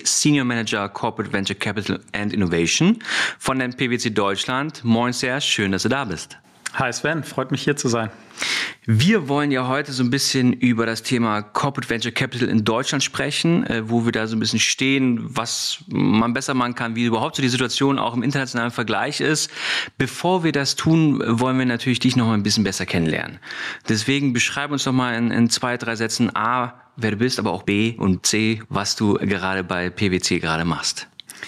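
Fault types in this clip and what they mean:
Gain pumping: Across the whole clip the level is pulled down on loud sounds, a gain swing of roughly 20 dB. Loud and quiet passages sit unnaturally close together, leaving the sound flat and squashed. The likely cause is input gain set far too high with a fast limiter clamping down. Unlike a noise gate, it turns the level down rather than muting it.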